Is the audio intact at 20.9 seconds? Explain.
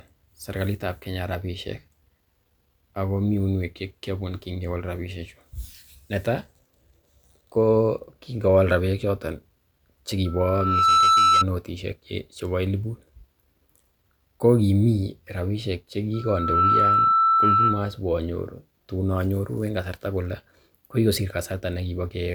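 Yes, at 20.9 seconds the speech plays through intact, with no dropout, click, distortion or other fault at that moment.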